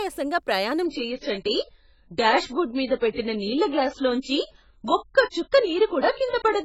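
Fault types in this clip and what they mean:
Adaptive stream at a lower bitrate: at 0.85 s the speech switches abruptly, with no gap, to a much thinner encoding that fits a very low AAC rate. Nothing remains above 7.6 kHz and codec artefacts rise. Unlike plain filtering, the treble loss arrives together with codec artefacts.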